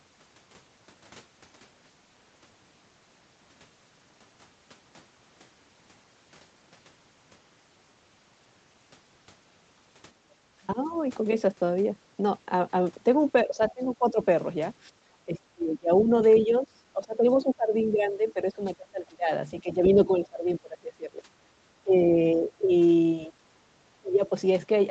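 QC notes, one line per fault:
10.74–10.95 s, 13.45–14.18 s, 14.97–21.22 s, 21.84–22.71 s, 23.27–23.35 s, 24.01–24.32 s, speech suppressed in double talk: the speech dips and breaks into pieces, sinking about 10 to 25 dB, longest in the 15–21 s stretch where around four seconds are pulled down. This is likely an echo canceller ducking the talker while the far side also spoke.
16.35–16.45 s, other side's voice leaking through: a brief, faint scrap of a second voice, roughly 15 dB under the main speech, slips in during the long suppressed stretch. The likely cause is loudspeaker echo that the canceller did not fully remove from the microphone.
21.50–21.56 s, background gated by the echo canceller: the room tone briefly ducks by about 8 dB for a split second, then returns. The canceller clamped the microphone hard while the loudspeaker was playing and released it once it let go.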